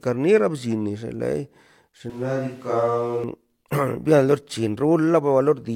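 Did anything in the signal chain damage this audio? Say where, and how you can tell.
Yes. From 2.10 to 3.24 s the speech goes suddenly roomy and hollow, loses bass, drops about 5 dB, and the background noise comes up to roughly 30 dB under the speech. That's likely a switch to a distant microphone at the analogue capture stage, with the close mic dropping out.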